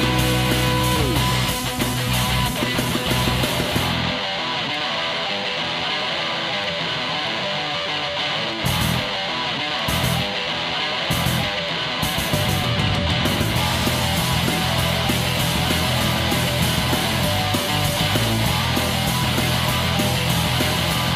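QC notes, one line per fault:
0.33–21.15 s, clock drift buffer slips: a regular click recurs every 0.63 s, around thirty in all, while sound is present. Likely cause: two devices on separate clocks roughly 500 ppm apart, so the buffer periodically drops or repeats a block, fitting about 15 samples.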